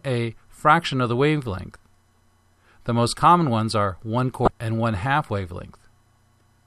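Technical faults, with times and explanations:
1.73–1.76 s, 4.44–4.48 s, 6.38–6.41 s: damaged data in a compressed stream. Corrupted bytes make the decoder misread frames and lose sync, producing brief blips of about 30 ms each.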